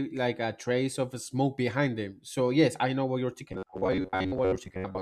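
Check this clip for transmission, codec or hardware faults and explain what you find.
One transmission fault appears near the end. From 3.52 s, right after "I know what you're", to the close, the clip has robotic sound from repeated short buffers, likely from audio arriving too slowly, so a 10.7 ms fragment loops over roughly half the material. That imposes a rigid 93.8 Hz metallic buzz that only loosely tracks the speech.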